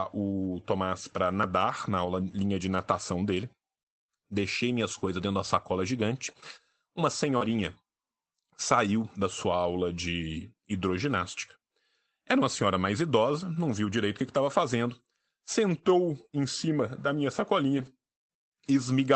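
Lost packets rebuilt from error correction appear in this speech clip at 2.05–2.07 s, 7.41–7.55 s and 17.77–17.87 s: low-bitrate backup copies carried in following packets fill 20, 80 and 60 ms without gaps but sound rougher and noisier. Short concealed packet loss occurs at 7.37–7.48 s and 17.89–17.93 s, where the receiver extrapolated the preceding sound to cover the missing audio, leaving a brief smear or wobble before blending back. Throughout, the Opus call path keeps the audio limited to about 8 kHz.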